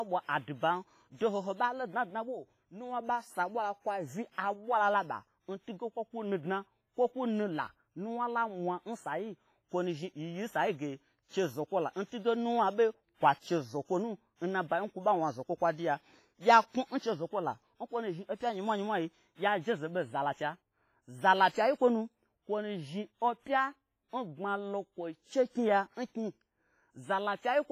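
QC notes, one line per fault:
Throughout, WMA compression: the speech rings and sounds washy, with hiss breathing along with it and nothing above 15.4 kHz, likely heavy low-bitrate coding around 24 kbps.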